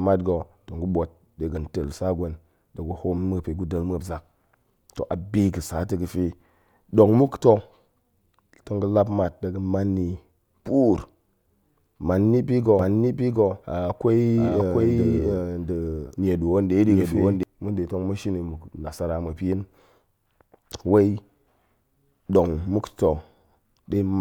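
Speech in which, from 12.79 to 17.43 s, a second full-band copy of the audio runs about 0.7 s behind at roughly equal loudness, with no decay or room colour, starting and stopping abruptly. This doubled audio track is likely a second capture through a slower path.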